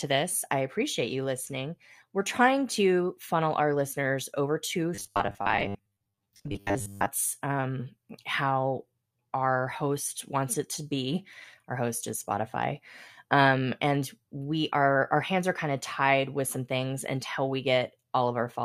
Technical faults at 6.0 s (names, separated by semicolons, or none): robotic sound from repeated short buffers